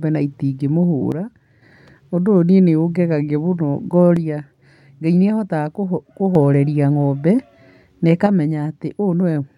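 At 1.12 to 1.62 s, 4.17 to 6.35 s, and from 8.26 s to the end, the speech abruptly drops about 6 dB, most likely one channel dropping out before the mono sum.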